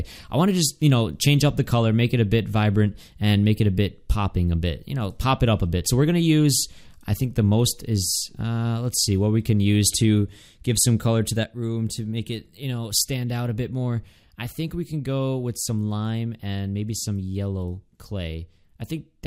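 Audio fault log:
11.44 s to end, sudden gain jump: the level drops by about 6 dB from one sample to the next and stays down for the rest of the clip. The sound and the background noise fall together, so the balance between them is unchanged and only the overall loudness steps down. There is no fade or ramp across the change, which points to a gain setting, likely a one-bit shift, applied instantly rather than smoothed over time.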